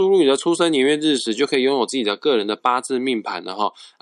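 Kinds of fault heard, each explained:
No technical faults can be heard in this speech recording. There is nothing here that calls for a fault to be named or explained.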